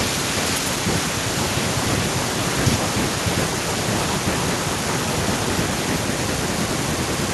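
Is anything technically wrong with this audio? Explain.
Yes. Throughout the speech there is echo with no canceller. The far end's loudspeaker leaks into its microphone and nothing removes it, so each phrase returns roughly 0.4 s later, about 12 dB quieter and thinner. The waveform shows faint trailing copies, and the spectrogram shows ghosted, offset repeats of every syllable.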